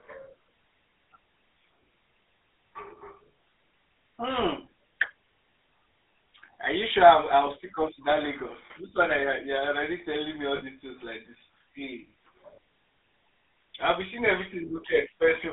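Throughout, the speech carries plainly audible GSM full-rate codec damage: a buzzy, gravelly roughness from pulse-driven vocal-tract modelling, which fits 13 kbps full-rate coding. The line band runs from 250 Hz to 3.6 kHz, leaving the speech thin and muffled.

Lost GSM frames occur at 8.66 s (40 ms), 10.56 s (60 ms) and 12.54 s (40 ms). Each gap is filled by repeating the last good frame, heard as a brief rough, metallic ring. The lengths fit runs of two or three 20 ms frames.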